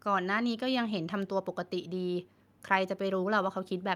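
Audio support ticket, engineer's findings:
Engineer's findings: no audio fault identified in the speech recording.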